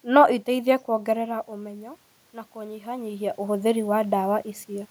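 From 0.88 s to 4.86 s the automatic gain rises: the input level drops by about 14 dB as the talker moves back around 1 s, and the control slowly adds about 5 dB of gain. Voice and room noise swell together across those four seconds.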